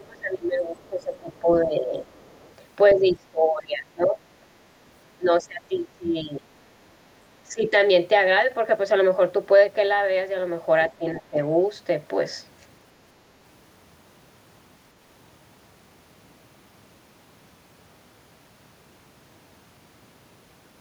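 From 0.0 to 2.0 s the speech dips by about 20 dB in pieces. This is likely speech suppressed in double talk, with the echo canceller turning both talkers down. Next comes the other side's voice leaking through. It is very faint from 2.13 to 2.53 s and briefly stronger at 2.9 s, likely echo the canceller left behind. Suppression then returns at 2.94 to 4.18 s and 5.17 to 6.49 s, up to about 25 dB deep. Shorter, shallower dips follow at 7.47 to 7.74 s and 10.98 to 11.39 s.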